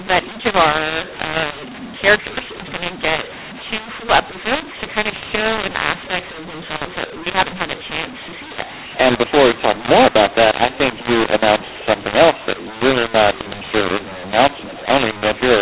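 From start to finish the speech sounds harsh and gritty. Levels are jumbled, with some parts too loud and others oddly thin, and every pause is filled with hiss instead of silence. This is mu-law and A-law mixed up. The telephone audio was encoded with the G.711 mu-law curve but decoded with the A-law curve, so each 8-bit code is mapped to the wrong amplitude, and the quietest codes come out well above zero.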